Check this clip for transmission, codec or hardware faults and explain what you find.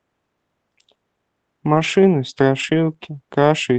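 The clip has one fault, twice: a lost packet rebuilt from error correction. It sits on an Opus call path whose roughly 8 kHz audio bandwidth and coding texture fit about 24 kbps.

From 1.75 to 1.85 s and again from 2.59 to 2.77 s, the sound turns briefly rough and noisier but never drops out. Several separate packets went missing. Opus in-band forward error correction carried a low-bitrate copy of each in the following packet, and the decoder played those copies, rebuilding about 60 ms and 100 ms of audio. The spans point to roughly three and five 20 ms packets. Unlike packet-loss concealment, nothing is smeared, repeated or faded. The real content continues, only coarser.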